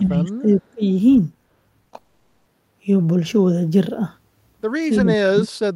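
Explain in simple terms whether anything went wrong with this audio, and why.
Several things went wrong. From the start to 0.82 s, the speech dips in level in patches totalling about half a second, most likely speech suppressed in double talk: the echo canceller heard someone at the other end talking too and turned this side down along with the echo. It happens again from 5.01 to 5.47 s, where the speech drops much deeper, to almost nothing. Unlike a network fault, the sound itself isn't replaced or smeared. It just gets quieter while the other side talks.

Around 1.83 to 1.87 s and again at 1.89 to 1.93 s there are two tiny blips. Each is short concealed packet loss: about 20 ms of audio didn't arrive in time, so the receiver stretched the last bit of sound to cover the gap. You hear a brief smear or wobble, and a short sound can go missing.

From 1.97 to 2.47 s comes a longer break, a long network dropout, likely caused by the connection stalling for nearly half a second. 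The receiver kept extending the last sound the whole time, so instead of silence you hear a buzzy or hissy continuation that fades. Then the speech resumes further on, with that half second of real audio lost. Its length and the fading filler are what set it apart from the brief blips just before.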